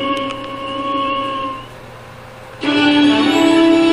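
No technical faults can be heard anywhere in this clip. Nothing in it calls for a timestamp or a fix.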